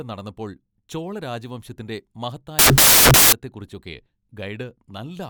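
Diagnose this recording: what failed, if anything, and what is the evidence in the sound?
The failure sits in sample-format conversion: between 2.59 and 3.33 s the samples are built from the wrong bytes, so each value is assembled from a misaligned or byte-swapped pair. The rapidly varying low-order bits end up in the most significant position, and the speech is replaced for about 0.74 s by loud, harsh broadband noise. Outside that stretch, the speech is reassembled correctly.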